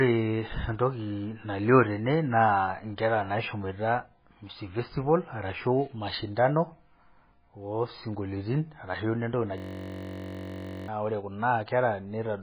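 Throughout, the speech has nothing above 5 kHz and a watery, swirling texture with smeared consonants, likely MP3 compression at a very low bitrate, around 16 kbps. The swirl sets it apart from simple low-pass filtering. From 9.58 to 10.88 s, a system hang loop repeats one 21.33 ms slice exactly, which fits a 1024-sample buffer. It makes a steady 46.9 Hz buzz rather than a dropout, and about a second and a half of speech is lost.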